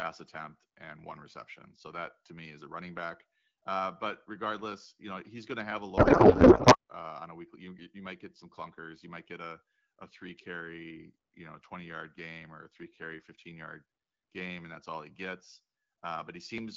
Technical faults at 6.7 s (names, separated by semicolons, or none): codec payload misread